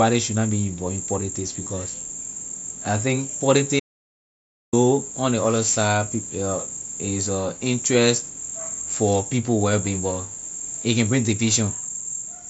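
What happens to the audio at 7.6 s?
Nothing goes wrong at 7.6 s; the speech is intact there, carried through the Bluetooth mSBC headset codec with no dropout, glitch or other fault at that moment.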